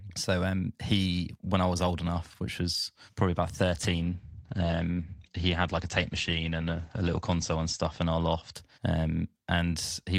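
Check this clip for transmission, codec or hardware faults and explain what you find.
One fault is present: a call bitrate drop from 3.85 to 8.81 s, just after "which was probably about". The bandwidth estimate fell, and the Opus encoder had to code with far fewer bits, consistent with a drop from roughly 40 to 12 kbps. Over about 3.4 s at the lowest rate, the sound turns rough and muffled. On a spectrogram, energy above 8 kHz vanishes abruptly, leaving a flat ceiling where content previously reached 20 kHz.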